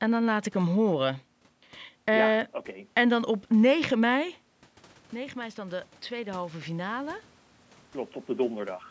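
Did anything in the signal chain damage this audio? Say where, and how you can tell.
Yes. Automatic gain rising in the call processing from 5.12 to 7.24 s lifts voice and room noise together by about 5 dB, unlike the talker moving near 4 s.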